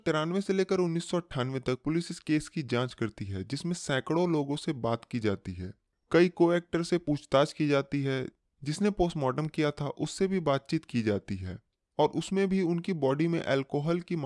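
No technical faults are audible.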